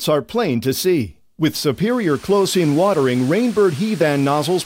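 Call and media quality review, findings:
No faults found in the clip. Nothing heard warrants a ticket entry.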